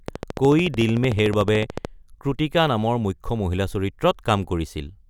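From 0.08 to 1.86 s there's a train of clicks, around thirty regular ticks at 13.6 per second, poking up to about 10 dB above the speech, likely from nearby equipment interference.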